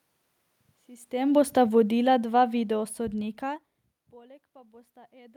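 From 1.22 s to 3.61 s you get automatic gain falling. Right around 1 s the talker seems to come closer to the mic, the level jumps, and the AGC decides things are too hot. It pulls its gain down by about 12 dB over roughly two and a half seconds. The giveaway is that the room noise sinks right along with the voice, so it's the whole picture getting quieter, not just the talker.

The opposite happens from 4.14 s to the end: automatic gain rising. Around 3.5 s the talker seems to move back, and the input drops by about 24 dB. The AGC then hunts for level and slowly cranks its gain back up. Over that last second or so the voice and the room background swell up together, which is that telltale pumping of a gain control catching up rather than anyone actually speaking louder.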